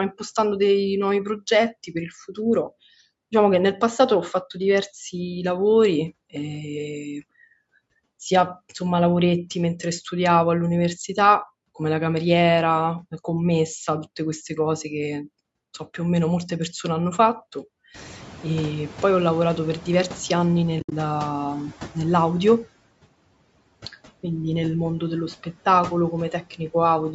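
At about 18 s the room noise jumps by roughly 21 dB, and from 17.94 to 20.68 s the noise suppressor is catching up. Its noise estimate trails the sudden rise, so the new background first comes through with little reduction, then sinks by about 6 dB over 2.74 s as the estimate adapts. This is one slow, steady settling after a single step in the noise, not the repeated breathing of a gate or compressor.

Right after, from 20.80 to 20.92 s, comes AAC frame loss with muting. About 100 ms of audio is missing, scattered across 120 ms, with the longest gap roughly 70 ms. That pattern fits around ten lost frames of a short-frame codec, likely AAC-ELD. The decoder zeroes the missing spectrum, and the overlapping windows fade the sound out and back in, leaving soft-edged holes. A hard sample dropout, by contrast, would leave sharp clicks at the cut points.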